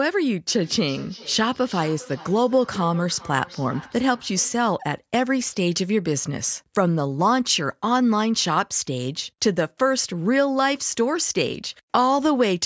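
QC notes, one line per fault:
0.48–4.63 s, feedback echo between two devices: speech returns about every 0.4 s, roughly 20 dB down, thinner each pass, as a nearby device's microphone re-captures the other's playback.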